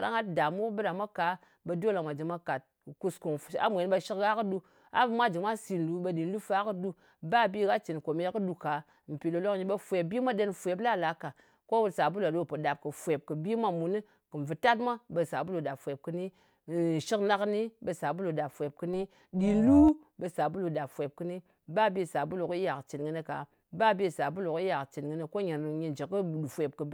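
From 18.93 to 19.89 s the speech has overlap-add ripple. Windowed frames were rejoined with overlaps that don't sum to a constant gain, so the level swings about 6 dB once per frame, around 400 times a second. Unlike mains buzz, this robotic roughness vanishes in pauses.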